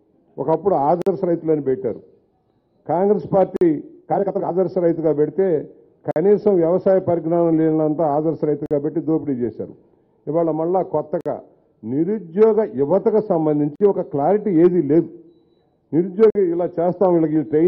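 Short, hard-edged holes of silence, each about 48 ms long, cut into the sound at 1.02, 3.56, 6.11, 8.66, 11.21, 13.76 and 16.30 s, spaced roughly every 2.55 s. This is a gap between chunks: the audio was delivered in 2.5 s pieces, and silence was inserted at each join. No content is lost, but playback is interrupted at every boundary, giving the steady, clipped stutter.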